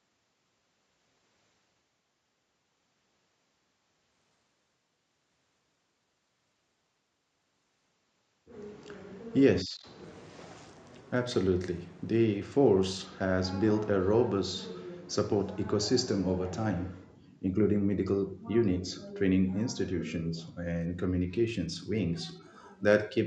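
Speech, hit twice by a Bluetooth SBC bit pool drop. From 10.03 to 13.05 s, and again from 20.81 s to the end, the treble goes dull and a gritty noise rises. The link was likely congested, so the encoder cut its bit budget. The sound points to a bit pool falling from 28 to 12, near 96 kbps. The top sub-bands then starve, and the rest is coarsely quantised. The call-style band limit at 8 kHz stays in place throughout.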